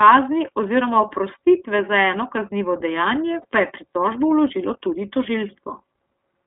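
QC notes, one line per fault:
Throughout, iLBC codec: the speech was squeezed through a narrowband VoIP codec, which fits a 13.33 kbps mode with 30 ms frames, and only about 200 Hz to 3.6 kHz survives. Each frame's excitation is coded on its own, leaving the voice clear but slightly rough and synthetic, with plainly audible coding damage.
3.41 to 3.45 s, lost iLBC frames: one 30 ms frame went missing and the decoder filled the hole by repeating the last pitch cycle blended with noise. That brief patch sounds like a held, faintly buzzy vowel, and because frames stand alone the voice recovers immediately afterwards.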